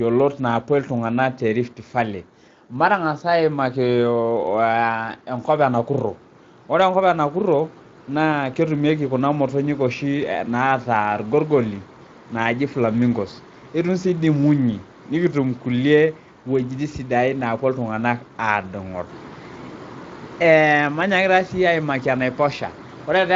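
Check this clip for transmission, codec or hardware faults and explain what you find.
No fault turns up anywhere in the speech. The Speex codec path leaves only a light coding texture, and the audio stops at about 7.7 kHz, which fits a wideband Speex setting near 24 kbps.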